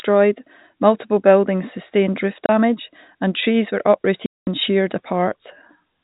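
Packets went missing and the receiver filled each gap with silence, so the speech drops out abruptly: a 30 ms hole at 2.46 s after "multiple buildings sustained roof", then a 210 ms hole at 4.26 s after "and trees were", both hard-edged, which fits 30 ms packets.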